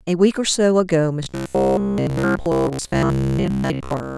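From about 1.23 s right to the end of the clip, the speech turns into a rigid, metallic buzz at about 66.9 Hz, still loosely tracking the words. That's the robotic sound from repeated short buffers: audio likely arrived too seldom, so the player kept looping the last chunk, roughly 15 ms given that buzz rate, instead of the real signal. Most of that stretch, something like two thirds or more, is repeats rather than fresh audio.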